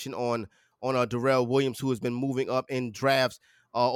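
No faults turn up anywhere in the recording: no dropouts, no discontinuities, no level or timing problems.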